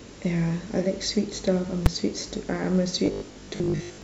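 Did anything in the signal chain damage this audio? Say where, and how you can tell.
Yes. At 1.86 s there's a single hard bang, a 5 ms block slammed to one extreme value. That's invalid numbers at full scale: some processing or sample-format math produced infinite or invalid values, which got clamped to the maximum. A block that short reads as one crack, not a pop pair.

From 3.06 to 4.02 s the voice turns into a rigid metallic buzz at 50 Hz while loosely tracking the speech. This is most likely robotic sound from repeated short buffers at the driver or buffer stage, with 20 ms chunks replayed while most of the real audio is skipped.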